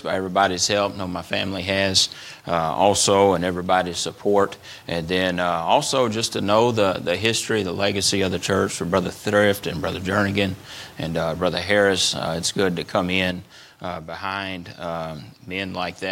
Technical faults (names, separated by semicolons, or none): one channel drops out